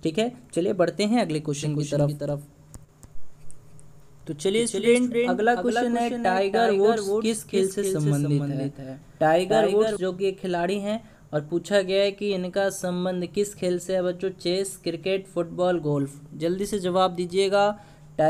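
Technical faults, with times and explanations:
1.6 to 10.0 s, doubled audio track: a second, full-band copy of the sound runs about 300 ms behind the original and roughly 5 dB quieter, starting and stopping abruptly at those points. The likely cause is a second capture path or an edit holding two offset copies. Unlike an echo or reverb, there is only one repeat, with no decay tail and no room colouring, so it sounds like a clean duplicate rather than a space.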